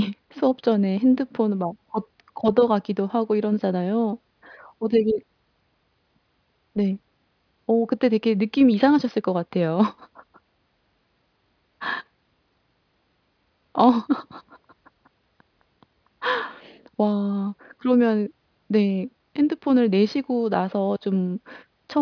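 Listening to the speech recording, nothing technical stood out.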